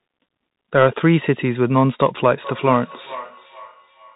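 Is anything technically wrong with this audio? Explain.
Yes, there are two faults.

The Bluetooth CVSD headset codec affects the whole clip. The speech passes through a narrowband Bluetooth link that sends one bit per sample to say whether the waveform steps up or down, with the step size adapting as it goes. The output is plainly damaged: nothing above about 3.8 kHz survives, which fits a 64 kbps CVSD stream. Loud high sounds outrun the step size and distort, s sounds turn scratchy, and a granular hiss sits under the speech.

Feedback echo between two devices runs from 2.43 s to the end. Two devices in the same room are on the call, and one plays back what the other's microphone sent. That microphone picks the playback up again, and its echo canceller can't remove sound that its own device didn't play. The speech returns roughly every 0.4 s, each copy thinner and more ringing than the one before, peaking about 16 dB below the direct speech.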